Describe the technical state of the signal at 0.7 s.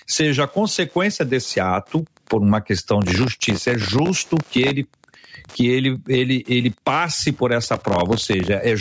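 At 0.7 s, as through the whole clip, a nearby Wi-Fi radio is coupling into the audio circuit, which rectifies its beacon every 102.4 ms. This is Wi-Fi interference: a steady ticking about ten times a second, faint at roughly 40 dB below the speech.

The gain is likely set far too high for the microphone, with a fast limiter pulling it back on each loud syllable. This gain pumping swings the level by around 15 dB, so the speech sounds squashed. The call's microphone processing caps the band at 8 kHz.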